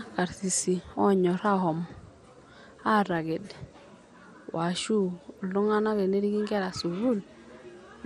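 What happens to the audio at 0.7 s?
At 0.7 s the speech sounds dull and gurgling, with granular distortion and nothing above 15 kHz. This is likely MP2 compression at a low rate, around 64 kbps, which starves and switches off upper sub-bands throughout.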